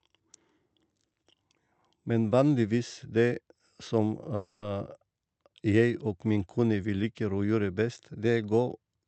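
At 4.35 s the speech stalls in a call audio freeze until 4.64 s. For about 0.27 s the last sound is stretched into a fading buzz, with no silence. Packets were likely held up and the jitter buffer ran dry. The speech then resumes where it stopped, nothing lost, only delayed.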